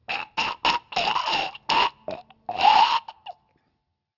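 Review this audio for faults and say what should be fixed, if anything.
Aliasing runs throughout the clip. The sample rate was reduced without an anti-aliasing low-pass filter first, and the result points to a drop from 48 kHz to 12 kHz. Content above the new 6 kHz limit folded back below it, landing on unrelated frequencies at roughly 15 dB under the wanted sound. The high end turns gritty and metallic, and the spectrum runs hard right up to 6 kHz. To prevent it, low-pass filter below half the target rate before any downsampling, or use a proper resampler that does so.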